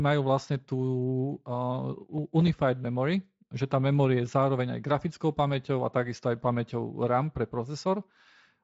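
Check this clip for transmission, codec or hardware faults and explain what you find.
I find no faults in this clip.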